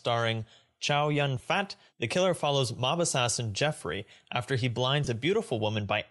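All the way through, the speech has a breathy, grainy edge up top, where the upper band sounds thinned out and filled in with hiss. That's likely Bluetooth LC3 compression, consistent with roughly 48 kbps and 7.5 ms frames, with the codec trading away high-frequency detail for noise fill.

Then there are two spots of lost LE Audio frames. At 1.39 s there's a tiny smeared blip where the decoder patched over what sounds like a single 7.5 ms frame by reusing the previous spectrum with scrambled signs. From 5.04 to 5.07 s, right after "after he", a longer gap of about 22.5 ms goes noisy and smudged, which fits three consecutive frames being concealed.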